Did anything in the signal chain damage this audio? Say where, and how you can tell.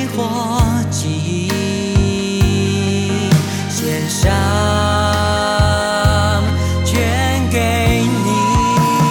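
Yes: loudspeaker feedback squeal in the analogue acoustic loop from 8.01 s to the end at 9.10 s. A steady 986 Hz tone swells over about 0.4 s to roughly the programme's level, as the microphone re-amplifies its loudspeaker. Unlike a test-tone or hum, it grows by itself.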